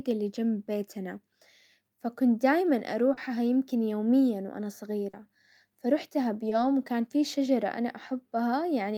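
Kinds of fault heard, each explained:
short concealed packet loss: Three brief smears in the speech, where 20 to 40 ms arrived too late and the receiver extended the preceding sound to bridge each gap.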